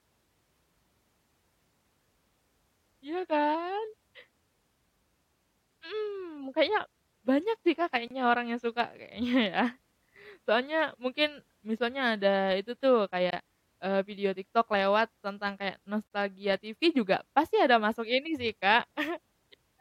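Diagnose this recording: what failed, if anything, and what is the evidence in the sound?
The speech clip was joined from separately encoded pieces without trimming, which put a codec-stage gap at a join of encoded pieces into it three times. Silences open at 8.08 s (about 30 ms, before "orang yang"), at 13.31 s (about 25 ms, between "itu tuh" and "eee video") and at 16.07 s (about 44 ms, after "lewat tentang kayak"). Each piece kept its encoder start-up delay and padded final frame, so the sound breaks off with edges smeared by the codec and resumes where it stopped.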